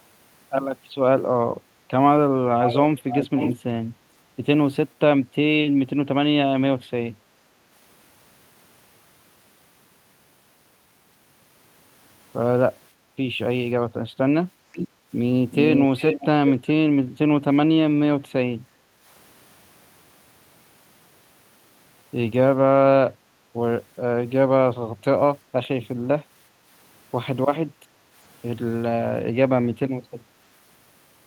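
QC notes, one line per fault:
2.62–3.55 s, echo leak: a delayed copy of the talker comes back about half a second late (538 ms), only about 5 dB under the live speech. Likely the far end is on a loudspeaker and its echo canceller let some of it through.
14.72–16.5 s, echo leak: same thing again but with a shorter 385 ms delay. A brief faint scrap at 14.72–14.88 s sits about 10 dB down, then a fuller stretch at 15.51–16.5 s comes back at about 5 dB down. Likely the same leaky canceller on a speakerphone.
12.93 s, 14.51 s, 18.63 s, 27.74 s, background gated by the echo canceller: the room tone ducks by about 7–8 dB for a short while each time, roughly a fifth of a second at 12.93–13.16 s and closer to half a second at 14.51–15.09, 18.63–19.05 and 27.74–28.14 s, then pops back. That's the canceller clamping the mic while the loudspeaker was playing and releasing it afterwards, so the background breathes in and out.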